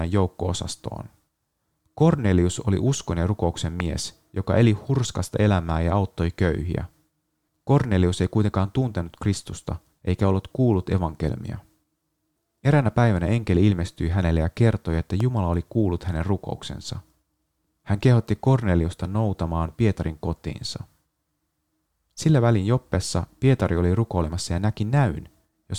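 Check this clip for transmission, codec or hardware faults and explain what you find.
Two loud pops interrupt the speech. The first, at 3.80 s after "oli uskon ja rukouksen", peaks well above the speech. The second, at 15.20 s after "hänelle ja kertoi että", is milder. Each is a single sharp thump, likely from a voltage spike such as a switch, plug or static discharge. Unlike a dropout, the speech carries on underneath without a gap.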